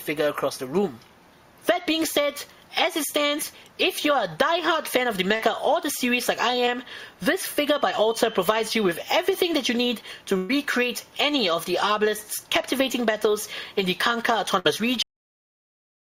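Around 5.35 to 5.41 s and again at 6.65 to 6.69 s there is short concealed packet loss. A sliver of the stream, about 40 ms the first time and 20 ms the second, failed to reach the decoder in time, so the receiver patched each hole by extending the sound that came before it and then easing back into the real signal. The result is a brief smear or wobble where that fragment of sound should be.

From 7.53 to 9.70 s a feedback whistle sits behind the audio. The likely cause is the loudspeaker-to-microphone path hovering just at the edge of feedback. That keeps a single high frequency ringing without letting it build up. It comes through as a thin, steady tone near 3.1 kHz, roughly 20 dB below the main sound, swelling and fading slowly in level for just over two seconds.

At 10.37 to 10.51 s, and again at 14.59 to 14.67 s, there is a burst of packet loss. Consecutive packets went missing or arrived too late to play, about 120 ms of audio in the first case and about 60 ms in the second. 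The receiver bridged each gap by carrying the last sound forward and letting it fade as the gap stretched on. You hear a held, dwindling fill, and then the audio picks up further along with that stretch simply gone.

At 15.03 s the clip has a cut-off end. The final buffers were never written out, so playback stops partway through a sound. Instead of decaying naturally, the audio falls straight to digital silence for the remainder of the clip.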